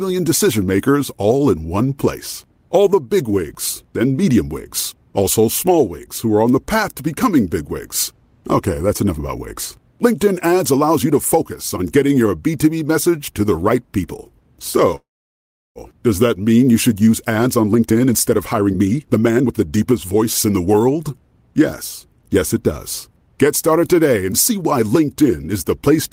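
At 14.95 s the speech halts in a call audio freeze: the last sound is stretched into a brief fading buzz, then about 0.71 s of silence, and speech resumes at 15.79 s with nothing lost. This was likely caused by delayed packets draining the jitter buffer. The waveform shows a decaying tail followed by a flat gap.

From 17.0 s to 21.1 s a jitter buffer speed-up plays the speech at about 119% of normal rate, with pitch unchanged, so it sounds hurried. Roughly 0.7 s of surplus buffered audio is trimmed away in many tiny pitch-period cuts, leaving the spectrogram's syllables compressed in time.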